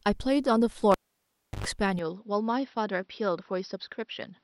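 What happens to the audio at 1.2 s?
A cable pulled and plugged in spans 0.92 to 1.67 s. The live lead is yanked with a pop, leaving about 0.70 s of near silence, then a 110 ms burst of 50 Hz mains buzz as the plug tip touches, and a second pop when the speech returns.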